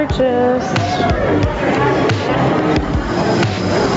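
Gain pumping runs through the whole clip. The gain swings roughly 10 dB. Loud and soft parts sit close in level and sound squashed. The likely cause is input gain set far too high, with a fast limiter clamping each peak. Above 8 kHz there is nothing, as expected from the call path.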